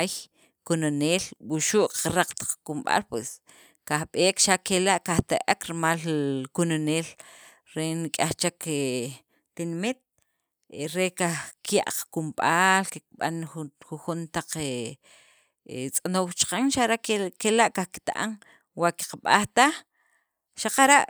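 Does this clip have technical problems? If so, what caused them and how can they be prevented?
No, there are no technical problems to prevent here.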